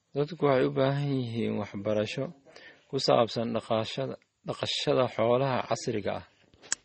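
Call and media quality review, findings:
Transcoding between lossy codecs, whole clip, speech. Likely cause: a low-bitrate Vorbis stage, around 34 kbit/s, re-encoded to MP3 near 32 kbit/s. MP3 stage spends its scarce bits re-coding the earlier artefacts, stacking its own smearing and swirl on Vorbis warble. Narrowest lowpass in the chain persists: no content above 8.4 kHz, dulling sibilants throughout.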